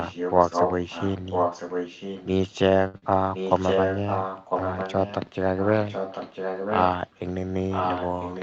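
From 0.00 to 2.29 s, the far end's echo canceller likely failed to remove loudspeaker pickup, so an echo leak returns the speech about 1.0 s late, only about 5 dB quieter. At 2.87 to 2.97 s, a short stall from a late packet emptied the jitter buffer, and the last sound is held for 63 ms with a slight buzzy drag. Right after, at 2.98 to 3.05 s, a short concealed packet loss left a 40 ms hole, which the receiver filled by extending the preceding sound, so it comes across as a brief smear. The same one-second echo leak returns at 3.34 to 5.32 s, weaker at 5.57 to 5.70 s (about 15 dB down), then again at 5.87 to 6.86 s and from 7.70 s to the end, each time as a delayed copy of the voice.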